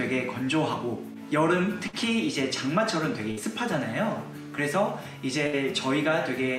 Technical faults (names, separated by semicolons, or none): burst of packet loss